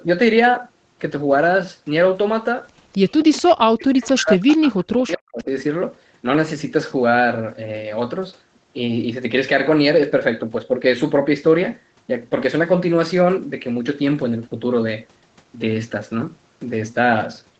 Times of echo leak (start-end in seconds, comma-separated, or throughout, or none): 2.92-3.42, 4.51-4.57